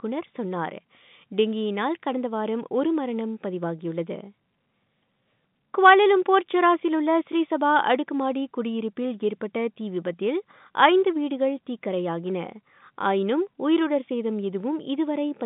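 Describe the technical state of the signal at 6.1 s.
At 6.1 s the speech is intact, carried in the ordinary telephone band with nothing above about 3.8 kHz, as G.711 telephone coding leaves it.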